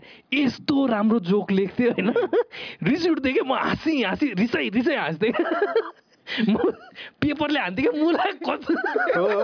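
Nothing stood out as a technical fault on listening to the clip.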